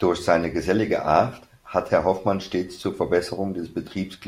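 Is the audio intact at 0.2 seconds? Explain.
Yes, at 0.2 seconds the speech runs cleanly, with no dropout, click, distortion or other technical fault audible at that moment.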